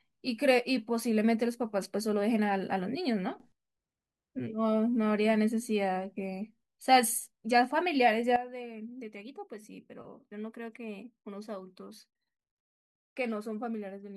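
Speech with two sudden gain jumps. At 3.40 s the level leaps up by about 12 dB, holding for 0.12 s until 3.52 s, and from 8.36 s to the end it drops by about 12 dB, with speech and background noise shifting together each time. On a waveform the envelope steps abruptly, and a spectrogram shows a vertical brightness edge across all frequencies. The likely cause is a digital gain change applied between adjacent samples without a ramp.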